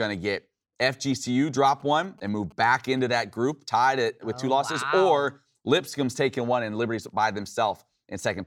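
From 1.8 to 3.23 s, a faint galloping dit-dit-dit of short 217 Hz buzzes: GSM signalling bursts from a nearby 2G phone, rectified by the audio circuit.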